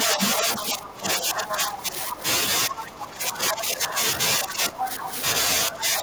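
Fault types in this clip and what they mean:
speech suppressed in double talk: The talker's level sinks by roughly 10 to 15 dB across 0.06 to 2.23 s, 2.67 to 5.11 s and 5.69 s to the end. This is likely an echo canceller turning everything down while both sides spoke. The waveform envelope sags and the spectrogram fades.
other side's voice leaking through: A second, quieter voice runs beneath the talker at 0.1 to 0.82 s, 1.38 to 2.2 s and 4.8 to 5.2 s, about 5 to 10 dB down. This is likely loudspeaker echo the canceller missed, appearing on the spectrogram as a separate set of harmonic traces overlapping the main voice.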